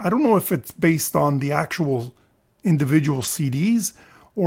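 From 1.85 to 2.03 s and 3.11 to 3.25 s, lost packets were rebuilt from error correction. Low-bitrate copies fill each gap, roughly 100 ms and 80 ms, so the speech briefly turns rougher and noisier.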